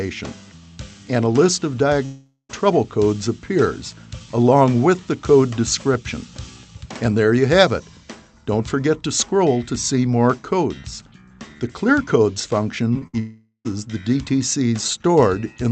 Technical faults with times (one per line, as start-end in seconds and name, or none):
2.05-2.51 long network dropout
12.93-13.03 short concealed packet loss
13.07-13.15 burst of packet loss
13.19-13.67 long network dropout